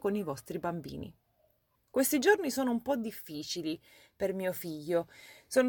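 Nothing in this speech recording stood out as a problem on listening.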